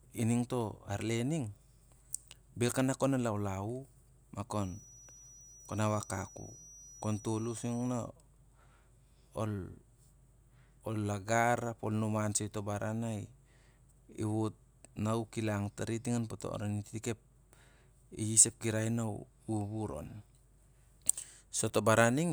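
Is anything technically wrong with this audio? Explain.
Yes. From 4.47 to 8.11 s there's a feedback whistle, a thin steady 5.8 kHz tone sitting well under the speech, likely a speaker-to-mic loop hovering right at the edge of feedback.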